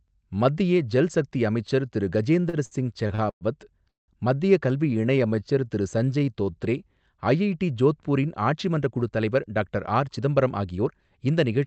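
Repeated stalls (stutter) run from 2.41 to 3.44 s, right after "ஜல் சக்தி அமைச்சர் திரு". Packets kept arriving behind schedule, so the jitter buffer emptied six times over about one second. Each time, the receiver stretched the last sound to cover the wait, filling 275 ms in total, with the longest hold at 108 ms. Nothing is lost, but 27% of that stretch is filler, so the speech drags and hiccups.

A call audio freeze sits at 3.89 to 4.11 s, just before "மத்திய கல்வி". The likely cause is packets held up in transit, which left the buffer empty for 190 ms. The receiver briefly continued the last sound, then let it die away, and about 170 ms of that is plain silence. When the audio resumes, it carries on from where it stopped, with no words missing, 190 ms later than before.

A jitter buffer slow-down follows from 4.90 to 6.57 s, starting after "மத்திய கல்வி". With its reserve running low or its target delay just raised, the receiver built up a reserve by repeating single pitch periods and slivers of pauses many times in a row. 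This added 221 ms. The speech plays at about 87% speed with its pitch unchanged, so syllables sound drawn out and slightly sluggish.

A jitter buffer speed-up runs from 8.53 to 11.11 s. By then the buffer held more audio than its target, so the receiver trimmed short pieces of one or a few pitch periods over and over. Roughly a third of a second was removed, and the speech runs at about 110% speed with its pitch unchanged, which makes it sound hurried. Throughout, the Opus call path keeps the audio band-limited to 8 kHz.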